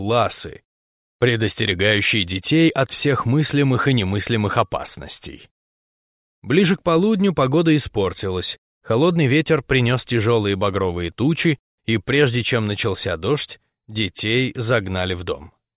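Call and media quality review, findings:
Nothing stood out on listening, and no findings to log for this recording.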